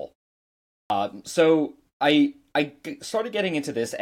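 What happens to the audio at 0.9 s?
At 0.9 s, "so I I" begins with a clipped start after a pause. The output device, idle through the 0.77 s pause, took about 71 ms to wake and swallowed 0.83 to 0.90 s. The waveform jumps from flat silence straight into speech, and the spectrogram shows an abrupt onset without the first sounds.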